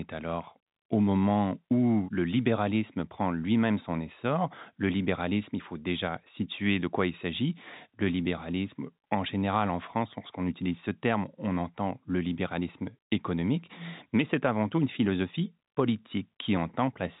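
Nothing stood out on listening to this speech, which comes through the narrow telephone band of G.711 coding with nothing heard above about 3.8 kHz.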